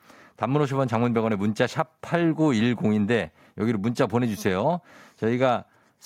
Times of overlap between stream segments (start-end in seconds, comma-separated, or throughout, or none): none